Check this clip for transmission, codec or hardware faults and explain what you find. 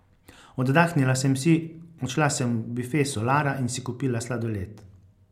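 Nothing stood out on listening to this speech recording.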